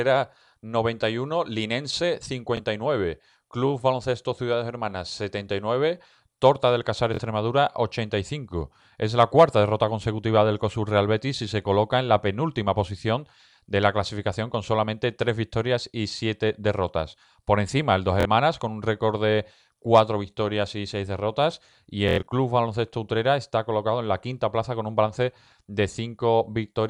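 At 2.57 s a Bluetooth stutter repeats a 23 ms slice of speech once. At 7.14 s, and again at 18.21 s just before "con un récord de", 46 ms is lost, which fits two dropped packets. The worst event is 22.09 to 22.27 s: 139 ms of repeats scattered over 186 ms, with the longest run 93 ms, heard as a brief machine-gun buzz. Late or missing packets made the receiver loop its last buffer, and the speech then jumps ahead, skipping the lost stretch.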